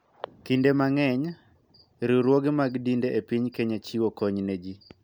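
No technical faults detected.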